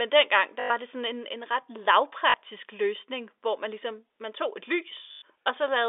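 At 0.6 s, just before "det sådan en en", the speech breaks into a robotic stutter lasting 0.1 s. This is packet loss with the last packet repeated. Audio went missing, and the receiver replayed the last chunk until fresh data arrived. The repeats fall out of step with the pitch, so the run buzzes, which fits 20 ms packets. A shorter 40 ms stutter comes at 2.3 s, before "løsning hvor man ligesom". A 0.1 s one follows at 5.12 s, after "ligesom man tog et". All of it sits on a narrow telephone band from G.711 coding.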